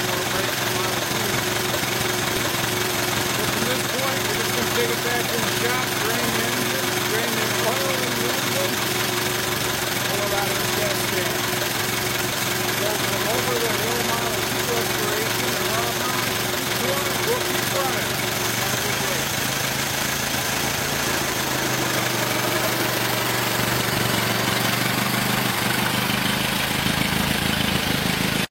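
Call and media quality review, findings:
Tiny skip at 10.35 to 10.37 s, waveform jumps as roughly 22 ms of audio goes missing. Overlap between stream segments in the segmenter or player: two segments' timestamps overlap and playback trims the overlap, discarding audio that was never doubled. The boundary fits 2-second segments.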